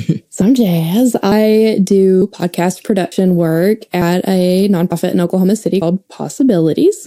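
At 3.12 s the speech skips forward. This is audio missing between chunks. About a tenth of a second of sound is gone. The audio on either side is butted together with no silence in the gap. It sounds like a sudden jump in the speech. The likely cause is a recorder working in 1.0 s blocks. It dropped a short piece while closing one block and opening the next.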